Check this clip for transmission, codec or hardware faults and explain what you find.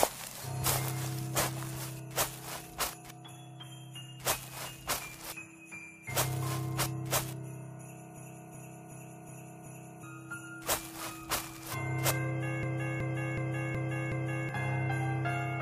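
There are two hardware-level faults. A system hang loop occurs at 8.17 to 10.03 s and again at 12.63 to 14.49 s. The machine froze while the buffer kept replaying. A 0.37 s slice, fitting a 16384-sample buffer, repeats five times at 2.69 Hz. It sounds like a skipping record, and about two seconds of audio are lost each time.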